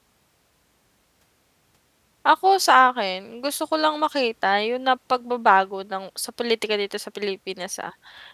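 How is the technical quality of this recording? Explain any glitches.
No glitches or faults heard.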